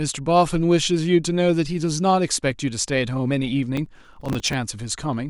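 Processor overload crackle from 3.77 to 4.53 s: the system missed a rapid run of tiny buffers, around 3 ms each, replaying stale audio as gritty tearing.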